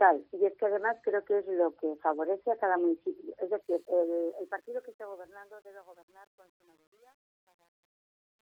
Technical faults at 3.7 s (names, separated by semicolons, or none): truncation distortion on a fade